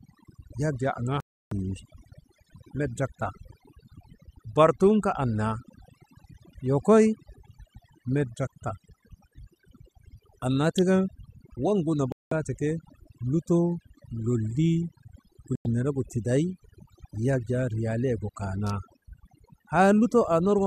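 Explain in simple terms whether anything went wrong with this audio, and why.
Overdone noise removal runs through the whole recording. A cleanup tool was set too aggressively, so whenever part of the sound came close to its idea of background noise, it pushed that part down hard or removed it. The quieter parts of the voice were caught too. As a result, the background sits in near silence with twinkling specks.

Digital broadcast dropout happens three times. The receiver stopped getting good data and muted itself until clean data returned, and whatever was sent during those moments is gone. The speech cuts to silence from 1.20 to 1.52 s, about a third of a second, then from 12.12 to 12.32 s, about a fifth of a second, and from 15.55 to 15.66 s, about a tenth of a second. Each time it resumes further along.

Electrical switching spike appears twice: a sharp snap at 10.78 s and a short burst of clicks from 18.67 to 18.70 s. 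Both sit on top of the speech rather than replacing it. They are likely caused by a nearby switch, motor or static spark whose tiny electrical arc leaked into the audio line.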